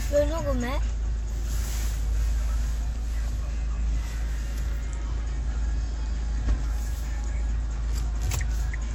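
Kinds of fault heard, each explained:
WMA compression: The whole clip carries plainly audible transform-codec damage: a ringing, washy smear around changes in the sound and a hiss that swells and fades with the signal level, as quantisation noise from long transform blocks spreads over tens of milliseconds and weak spectral lines drop out. The cause is likely Windows Media Audio encoding, with the degree of damage pointing to a bitrate around 48 kbps. Content extends up to about 19.9 kHz, with nothing above.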